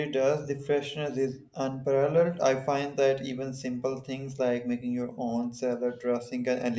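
No technical faults are audible.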